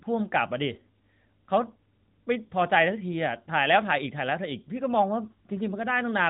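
Nothing technically wrong can be heard in this speech recording. It has come through the AMR narrowband mobile codec at 12.2 kbps, so the sound stops at 4 kHz and carries the light, slightly synthetic colouring of that path.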